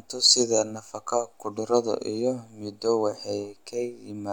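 Nothing in the recording stood out as a technical problem when listening to it.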